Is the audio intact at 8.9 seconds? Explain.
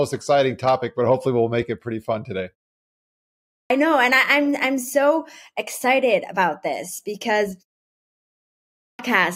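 No. At 8.9 seconds the speech falls inside a clipped start after a pause. After a silence of about 0.93 s, the output device has gone idle. It then needs time to wake and lock before it passes audio again. The first 0.51 s of speech, from 8.48 to 8.99 s, is lost. The speech begins abruptly out of silence at 8.99 s, missing its opening sounds.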